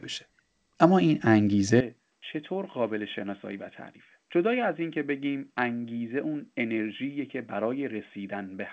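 At 1.81 s the speech abruptly narrows and drops by roughly 10 dB, with no gap at the join, and stays that way to the end. This is most likely an input switched to a poorer device. The new device passes nothing above 3.5 kHz, so the sound turns boxy and dull. On a spectrogram, energy that reached 8 kHz through the G.722 call path stops sharply at 3.5 kHz, while the waveform shrinks and a faint new noise floor, about 50 dB down, appears.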